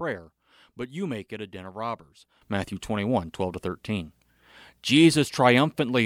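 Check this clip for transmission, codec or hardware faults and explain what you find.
One fault is present: a sudden gain jump at 2.42 s, right after "a den of robbers", which lasts to the end of the clip. From that point the speech and the background noise step up together by about 12 dB, with no fade between the two levels. The likely cause is a gain setting or bit shift applied between one sample and the next without a ramp, so everything after it plays back louder and the noise floor rises audibly too.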